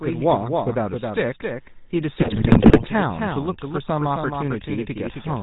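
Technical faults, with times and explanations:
throughout, doubled audio track: a second full-band copy trails by about a third of a second and a few dB quieter, likely a slower capture path; unlike an echo, it has no decay or room colour.
throughout, GSM full-rate codec: buzzy, gravelly roughness with nothing above 4 kHz, which fits a 13 kbps full-rate coder; the roughness comes from its sparse pulse excitation, not from simple band-limiting.
2.16 to 2.88 s, GSM bit errors: squawks, pops and gargling, as corrupted filter, pitch and gain values bend the spectrum and spike the level; the sound is garbled rather than dropped out as with lost packets.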